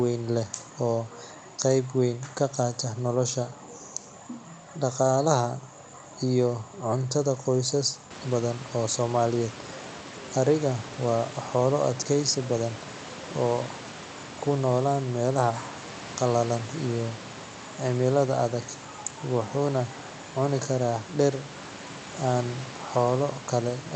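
No technical faults are present: the room's background noise rises by about 11 dB at around 8 s and then stays about 18 dB below the speech, and the call path's band limit near 8 kHz fits a wideband Opus setting.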